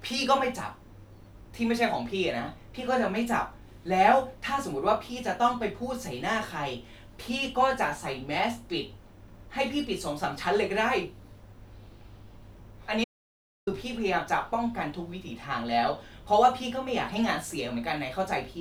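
At 13.04 s the speech cuts off abruptly in an audio dropout to silence, returning at 13.67 s; roughly 0.63 s is lost. The gap is silent with no room tone, likely from lost input while recording continued. Waveform and spectrogram show a flat, empty band.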